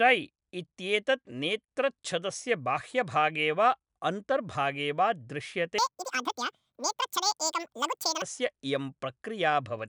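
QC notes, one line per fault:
5.78–8.22 s, wrong sample rate: the speech suddenly runs at double speed and jumps a full octave (12 semitones) higher, sounding chipmunk-like and rushed. Speed and pitch rise together, which points to audio captured near 22 kHz being played back at 44.1 kHz without conversion.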